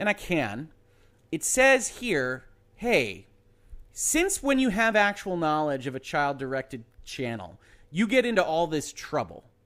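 A speech recording with no audible technical faults.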